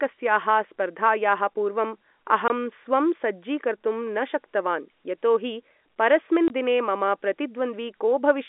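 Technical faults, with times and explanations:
2.48–2.50 s and 6.48–6.50 s, packet loss filled with silence: two 20 ms holes, the second between "शक्तवान् यतोहि परस्मिन्" and "दिने मम". Each fits one lost packet played as silence. The edges are abrupt.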